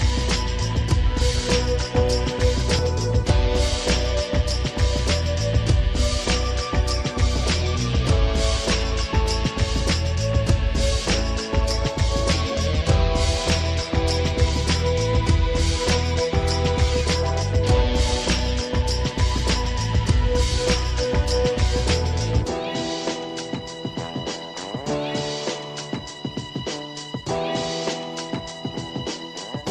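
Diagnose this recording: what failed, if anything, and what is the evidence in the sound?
Overlap between stream segments at 2.79 s: a tiny skip where a few milliseconds of sound drop out. This is a streaming or playback fault. Two consecutive segments, which fit a 6-second length, carry overlapping timestamps, and the player trims the overlap even though the sound was never duplicated, so the waveform jumps.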